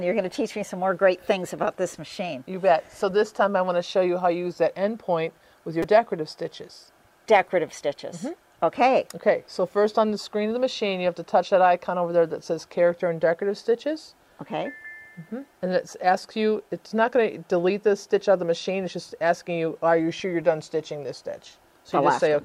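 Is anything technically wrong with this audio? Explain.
Yes. At about 5.83 s there is a repeated buffer. Fresh audio failed to reach the output in time, so the device replayed its last 5 ms block three extra times, and roughly 15 ms of real sound never played. With a block this short, the repeats fuse into a brief click or buzz. On a waveform you would see the same tiny cycle copied in a row with hard joins. A spectrogram would show a thin vertical streak with harmonics spaced at 200 Hz.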